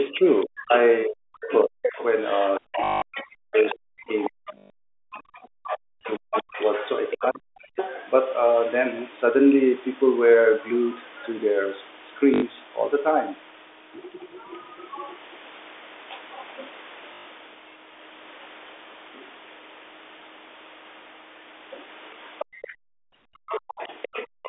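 A speech recording from a call, with several faults. From 0.08 to 7.77 s the talker's speech dips, thins and breaks up in pieces. It falls by about 40 dB at its deepest, over roughly five seconds in total. A second short dip comes from 23.40 to 23.46 s. The likely cause is speech suppressed in double talk. Both ends spoke at once, and the echo canceller could not tell the talker from the loudspeaker echo, so it cut both. A second voice also comes through from 0.27 to 5.19 s, from 6.34 to 7.92 s, and from 22.39 s to the end. It sits around 10 to 15 dB under the main speech. The likely cause is the other side's voice leaking through. The talker's device played the far end from a loudspeaker, and the canceller left some of it in the microphone signal. Four short robotic stutters follow, from 2.84 to 3.02 s, 4.58 to 4.70 s, 12.34 to 12.42 s and 17.14 to 17.26 s. They last 180, 120, 80 and 120 ms. 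These are packet loss with last packet repeated. The receiver replayed the final good packet until new audio arrived. The runs buzz at a rate that fits 20 ms packets. Near the end, the room sound drops out from 22.45 to 23.12 s and again from 24.27 to 24.43 s, by about 40 dB. This is background gated by the echo canceller. The canceller clamped the microphone hard while the loudspeaker played, then released it. All of this arrives within a narrow telephone band.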